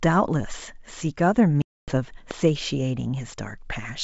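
At 1.62 to 1.92 s there's packet loss on an ADPCM call, a hard-edged 260 ms hole, around fifteen packets' worth. When the speech comes back the decoder's predictor is out of sync, so it returns slightly distorted before settling. Then at 2.31 to 2.33 s a single loud pop jumps about 10 dB above the speech, which carries on underneath, likely a plug, switch or driver glitch. The G.722 wideband coding underneath sounds clear up to around 7 kHz, consistent with the 64 kbit/s mode.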